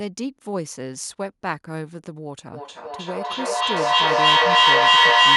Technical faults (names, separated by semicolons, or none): feedback echo between two devices